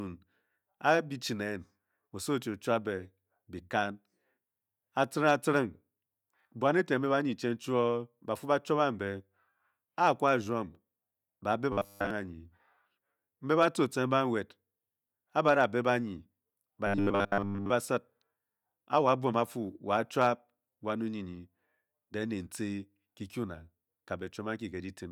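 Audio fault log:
11.73–12.11 s and 16.87–17.70 s: robotic sound from repeated short buffers. Just after "ba beh", the speech turns into a rigid metallic buzz at 100 Hz. The likely cause is a 10 ms slice being replayed when fresh audio arrives late. The first stretch is repeated throughout, and the second is mostly repeated.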